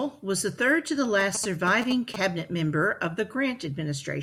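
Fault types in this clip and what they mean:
GSM signalling bursts: from 1.20 to 2.16 s, after "was the third to" and before "member of", a galloping dit-dit-dit of short 217 Hz buzzes, about 5 dB below the speech. A nearby 2G phone's brief radio bursts are rectified by the audio circuitry.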